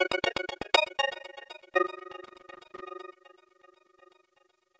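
The clip is an everyday sound recording. An overlap-add ripple runs through all of it. The level pumps up and down around 20 times a second, with a depth of about 60 dB. That is heard as a fast, rough tremolo. The audio was split into windowed frames and rebuilt. The overlapping windows did not sum to a steady gain, so each frame leaves its own dip and swell. From 2.26 to 2.80 s there is loose connector crackle, an irregular burst of scratching. A worn or dirty contact kept making and breaking, chopping the signal. The audio also passed through a call path, and nothing is heard above 8 kHz, which fits a G.722 codec at 64 kbps.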